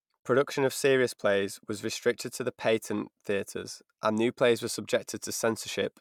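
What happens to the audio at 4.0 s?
At 4.0 s the speech continues cleanly, with no dropout, click, distortion or other fault.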